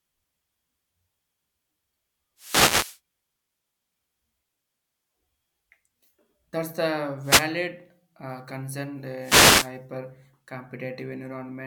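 Wireless microphone noise hits at 2.37–3.00 s, 7.21–7.51 s and 9.19–9.72 s: the FM link fades, and receiver static swishes over the speech as broadband spectrogram smears.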